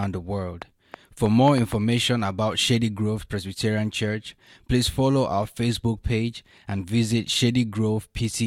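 Right from the start of this speech, at 0.04 s through 1.73 s, there's a train of clicks: around seven similar pops at roughly 3.6 per second, uneven spacing, poking about 10 dB above the signal. Likely interference from nearby gear or a faulty connection injecting pulses.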